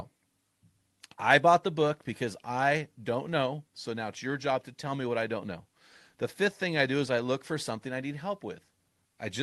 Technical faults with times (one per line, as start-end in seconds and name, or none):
none